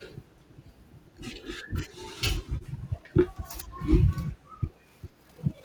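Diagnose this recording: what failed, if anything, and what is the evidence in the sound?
The speech level repeatedly sinks for short stretches, at 0.28, 0.5, 1.68 to 2.1, 2.42 to 3.16, 3.61, 4.31 to 4.88 and 5.06 s, and the deepest dips reach about 15 dB. This is likely speech suppressed in double talk, a fault in call processing: the echo canceller mistook the near talker for loudspeaker echo and turned the send path down. Unlike network dropouts, no glitch or repeated fragment appears.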